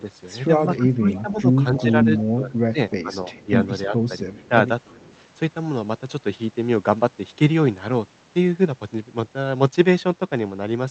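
From 0.67 to 5.07 s the speech dips and breaks in pieces, falling by roughly 15 dB at worst across about a second and a half in total. This is speech suppressed in double talk: the echo canceller likely mistook overlapping talk for echo and attenuated both.

Overlapping that span, at 1.14 to 2.23 s, 2.9 to 3.45 s and 4.44 to 5.17 s, a faint copy of the sound returns 300 ms late. It is strongest in the first burst, roughly 20 dB down, then weaker. This echo leak is likely residual loudspeaker pickup passing the canceller.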